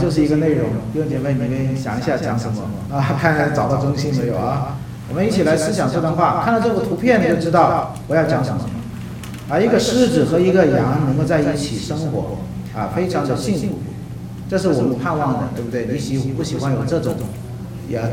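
From start to finish, every sound is shadowed by a second copy arriving about 150 ms later and roughly 5 dB quieter, giving a flat, stuttering slapback with no reverberant tail or room colouring. This is a doubled audio track: the full-band signal has been mixed in twice, out of step by a fixed offset, most likely because it was captured a second time through a slower path or an edit left two misaligned copies layered together.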